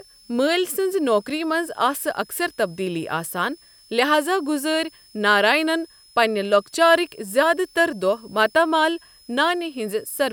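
A thin, high whistle sits under the speech from start to finish, wandering between about 5.12 and 5.29 kHz, roughly 30 dB below the speech level. This is a switching supply whistle. A switch-mode power supply feeding the recording chain is cycling at an audible rate, in burst mode or beating against another supply, and its pitch shifts as the load it drives changes.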